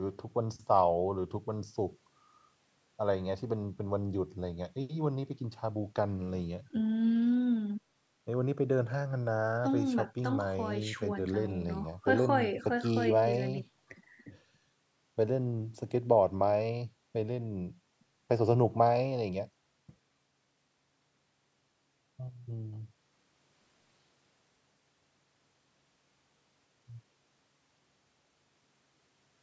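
No technical faults can be heard anywhere in the speech. The call microphone processing leaves nothing above 8 kHz and trims away the lowest bass, as that kind of path normally does.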